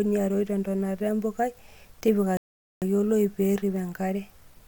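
At 2.37 s the speech cuts to silence, and it stays silent until 2.82 s. This is a rebuffering stall: playback ran out of downloaded audio and paused. It resumes exactly where it stopped. Nothing is lost, but about 448 ms is added.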